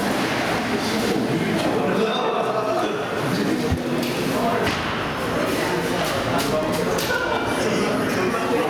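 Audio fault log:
Throughout: gain pumping. Loud and soft parts sit closer in level and the sound is squashed, with a swing of around 15 dB. This is likely from gain set far too high feeding a fast limiter. Unlike a noise gate, it never cuts to silence.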